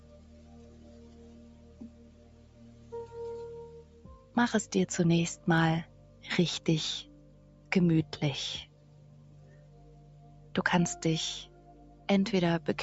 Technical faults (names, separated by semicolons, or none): noise suppressor applied to music or sounds